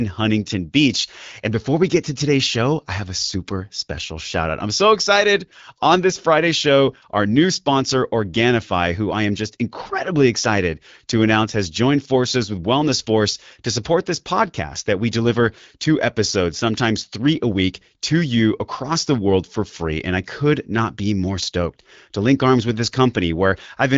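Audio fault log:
No faults to log for this speech clip.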